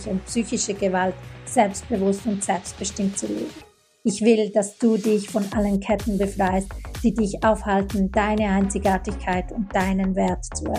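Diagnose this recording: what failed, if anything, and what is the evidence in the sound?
Nothing failed; no fault can be heard anywhere.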